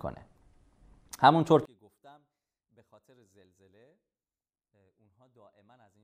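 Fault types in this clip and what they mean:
One channel inverted: from about 1.65 s to the end, the speech drops by about 35 dB and almost disappears, leaving only a faint trace. That's likely one side flipped in polarity, so the shared centre content cancels when the channels are summed to mono.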